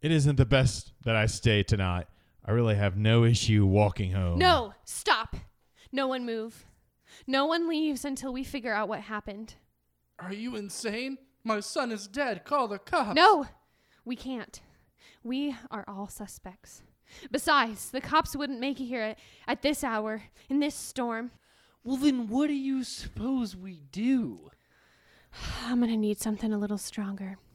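Speech recording with no technical faults audible.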